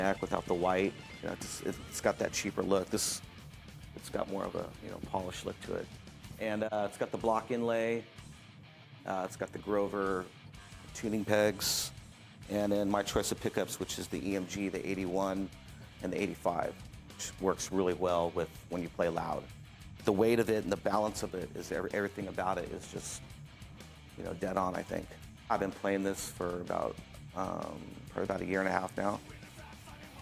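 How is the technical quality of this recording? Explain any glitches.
No audible glitches or faults.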